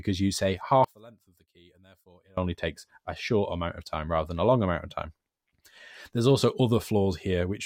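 From 0.84 to 2.37 s, after "because you say", the speech nearly vanishes, dropping by about 28 dB. Only a faint residue remains until "takes a short amount". This is likely one channel inverted, cancelling the centred voice when summed to mono.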